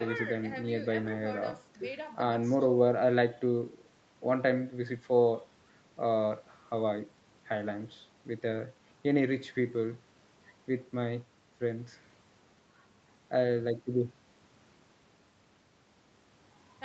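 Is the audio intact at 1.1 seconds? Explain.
Yes, the speech at 1.1 s is intact, with nothing there beyond the ordinary call processing and codec path.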